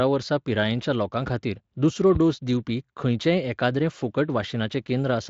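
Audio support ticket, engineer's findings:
Loud pop at 1.27–1.30 s, a single sharp thump peaking about 5 dB over the speech. Loud pop at 2.15–2.18 s, single, stronger, about 10 dB above the speech. Likely cause: a voltage step from a connector, switch, static discharge or driver glitch, shaped by the downstream circuitry into a short pulse. The speech carries on under both with no gap, so these are not dropouts. Each lasts about 30 ms, longer and heavier than a digital click. The Speex coding, band-limited near 7.7 kHz, is steady through both events.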